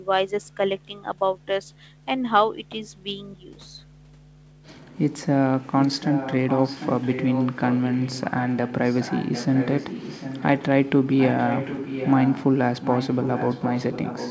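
A far-end echo canceller likely let loudspeaker pickup slip back, causing echo leak from 5.81 to 10.63 s, a faint scrap at 10.85–10.89 s, then 11.06 to 12.47 s and 12.81 s to the end. The speech is shadowed by a copy about 0.75 s late, roughly 10 dB quieter.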